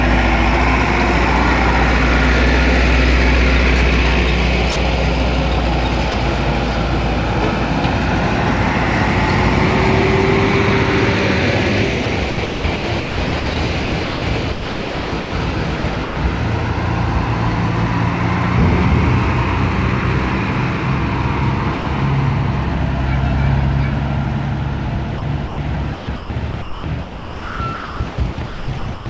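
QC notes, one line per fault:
4.72–4.76 s, 6.12–6.14 s and 21.78–21.86 s: sound dropped by the voice detector. For 40 ms, 20 ms and 80 ms the sound gives way to a flat, steady hiss and then returns. The sender's detector likely judged a quiet moment to be background and stopped sending, so the receiver filled in comfort noise. On a spectrogram, each gap shows the detailed structure replaced by a smooth, even wash of noise. On the waveform, the envelope drops to a uniform low band. Under all of it, the band stops at 8 kHz, which fits a G.722 call at 64 kbps.
12.04–16.16 s and 25.18–29.06 s: sound chopped by the voice detector. Within each stretch, the detector likely switched transmission on and off repeatedly. About 1.9 s of the first stretch and about 2.1 s of the second were replaced by comfort noise. Quiet edges drop out, so the sound is choppy. A spectrogram shows alternating blocks of detailed content and featureless noise. 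The waveform shows a ragged on/off envelope with flat, even filler between bursts.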